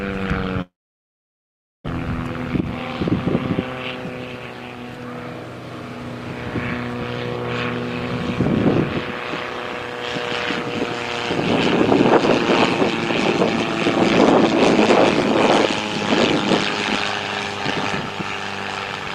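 A long network dropout runs from 0.61 to 1.88 s, likely caused by lost packets. The last sound continues as a fading buzz or hiss, then about 1.1 s of near-silence follows, and the audio resumes with roughly a second of material missing.

A jitter buffer speed-up follows, from 2.48 to 3.23 s at 106% speed and again from 3.75 to 5.05 s at 113%. The receiver drained excess buffered delay by cutting short pitch-period slices, roughly 50 ms and then about 200 ms. The sound hurries while its pitch stays put.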